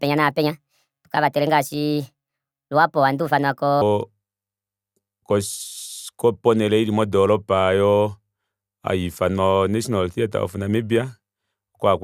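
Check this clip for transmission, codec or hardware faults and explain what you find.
One fault is present, a wrong sample rate over the first 3.81 s. Playback runs faster than the recording rate with no conversion, which fits 32 kHz audio played at 44.1 kHz. Speech is sped up 1.38 times and raised about 5.5 semitones, sounding high and hurried.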